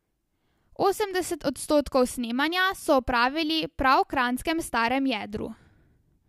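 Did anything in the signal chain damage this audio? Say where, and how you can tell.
No, nothing in the signal chain can be heard to have damaged this speech recording. No stage leaves an audible trace on the sound at any point.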